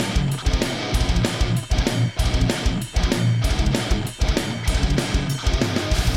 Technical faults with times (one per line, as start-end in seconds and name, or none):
3.92 repeated buffer